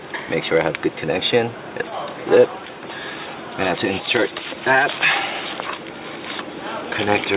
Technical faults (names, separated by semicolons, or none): none